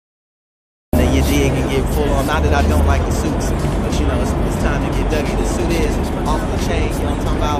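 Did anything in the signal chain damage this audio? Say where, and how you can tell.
Yes, a cut-off start at the capture stage: from 0.0 to 0.93 s there is only digital silence, then at 0.93 s the sound begins already mid-event with no attack. Recording began late. A waveform shows a flat line meeting full-level signal; a spectrogram shows a vertical edge.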